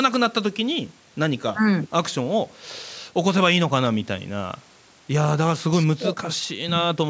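No technical faults can be heard in this speech; it carries the ordinary shaping of a call microphone chain, with the lowest bass trimmed by its high-pass filter and nothing present above 8 kHz.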